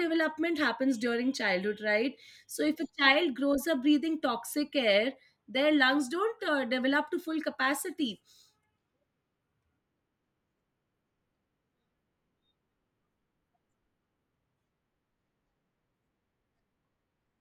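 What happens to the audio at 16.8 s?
At 16.8 s the speech carries on intact, with no dropout, click, distortion or other fault to be heard.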